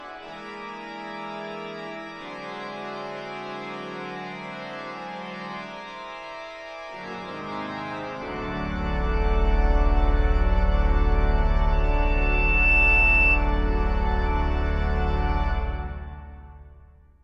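At 11.72 s a thin, piercing tone at 2.7 kHz begins to swell, climbing over about a second until it sits roughly 5 dB above the rest of the audio, then it stops at 13.44 s. This is loudspeaker feedback squeal: the microphone was picking up the loudspeaker it was feeding, and at 2.7 kHz the loop gained more than it lost, so that frequency kept amplifying itself.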